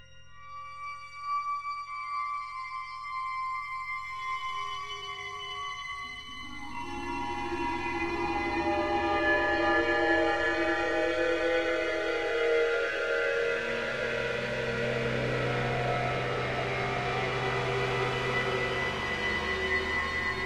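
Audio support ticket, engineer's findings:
Time-stretched section, 4.35 to 6.79 s: sound abruptly rushes, pitch unchanged, pace roughly 1.54x. Likely time-stretch processing in a length-fitting stage, squeezing audio by dropping short slices while holding pitch.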